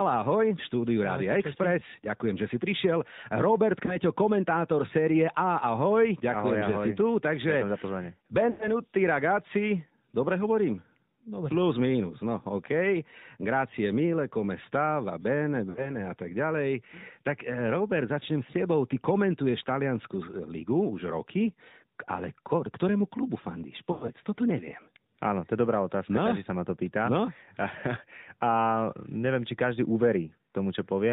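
Throughout, the speech shows AMR narrowband mobile codec damage. Nothing above 4 kHz survives, and the buzzy, synthetic texture fits the 10.2 kbps mode. Lost AMR speech frames occur at 3.86–3.98 s, 8.50–8.68 s, 15.70–15.97 s and 23.92–24.11 s. At each, the decoder reuses the last pitch and vocal tract settings at falling gain, producing dips and smeared, fading sound, then a rough recovery.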